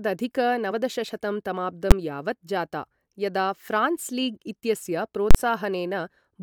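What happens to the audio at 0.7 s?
Damaged data in the compressed stream at 0.70 s makes the decoder misread a frame and lose sync, leaving a brief chirp or blip in the speech.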